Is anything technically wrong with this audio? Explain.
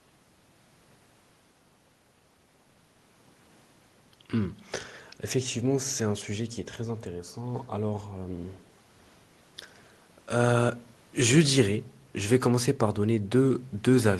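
No, nothing technically wrong can be heard here.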